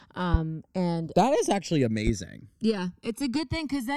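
Channels drifting apart runs through the whole speech clip: the two sides seem to come from devices on independent clocks differing by a few hundred parts per million, so their offset creeps to around a millisecond, and any mono sum sweeps comb notches through the spectrum, giving slow flanging. A loud pop lands at 0.34–0.37 s, about 15 dB above the speech, and another at 2.07–2.11 s, about 10 dB above it. Each is a single sharp click over continuing speech, likely from a voltage step such as a switch, plug contact or driver glitch.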